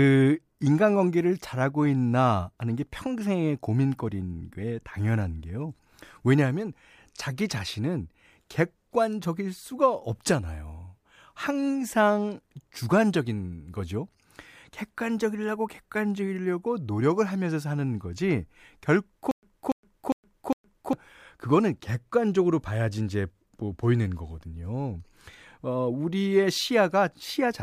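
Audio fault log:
19.31–20.93 s: stutter with silent gaps. A 0.29 s fragment repeats four times, 0.12 s digital silence between, likely a stalled stream replaying its last buffer.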